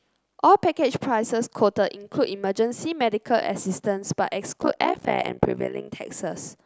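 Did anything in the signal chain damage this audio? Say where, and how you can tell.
Yes, there's overlap-add ripple in the speech from 4.59 to 5.90 s: a metallic buzz around 70 Hz, with the level dipping by about 60 dB each frame. Some frame-based processing stage rebuilt the signal with windows whose overlap doesn't sum to constant gain.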